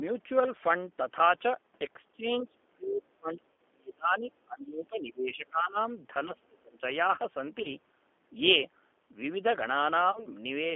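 Throughout, the G.729 codec leaves the speech slightly rough and synthetic. On a spectrogram, energy is confined to roughly 250 Hz to 3.5 kHz with a hard ceiling, which fits an 8 kbit/s G.729A stream. The harmonics look smeared and grainy, and the codec damage is plainly audible.

From 2.13 s to 5.75 s the speech repeatedly dips, thins and drops out in pieces, about three seconds in all, with the deepest cuts reaching around 30 dB. This is likely speech suppressed in double talk: an echo canceller turning the talker down while the far side also spoke. The waveform shows ragged envelope notches, and the spectrogram shows patchy vertical gaps, worst in the upper band.

VoIP packet loss concealed by the speech codec occurs at 3.52 to 3.57 s, where about 60 ms is missing (fitting two lost packets), and at 7.62 to 7.70 s and 10.12 to 10.29 s, about 30 ms each. In each case the decoder stretches the last sound into a buzzy tone or coloured noise that fades. 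On the spectrogram these appear as frozen stretches that fade out. The speech stays weak briefly after each gap.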